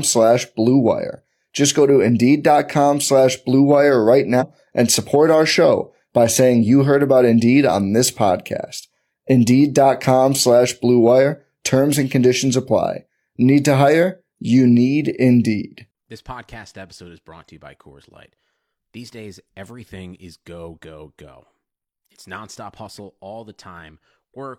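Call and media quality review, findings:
Compressed frames skipped, 4.37 to 4.43 s, just before "and support our show". Decoder side, likely missing or rejected frames. Speech jumps forward about 150 ms, roughly three frames, which fits a frame length near 46 ms. Unlike a packet-loss dropout, there is no gap or concealment fill, only missing time.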